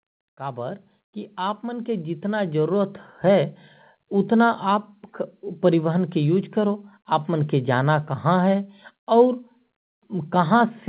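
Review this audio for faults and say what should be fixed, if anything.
From 0.36 s to 3.56 s there's automatic gain rising: the AGC decided the input was too quiet and slowly pushed its gain up about 11 dB, so voice and background swell together before settling, above a call-path band that stops at 4 kHz. Fix it by setting a sensible input level upfront or slowing the AGC's initial attack.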